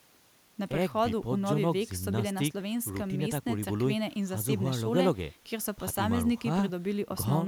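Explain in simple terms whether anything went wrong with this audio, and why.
Nothing went wrong here: the speech is intact, with no audible faults at any point in the recording.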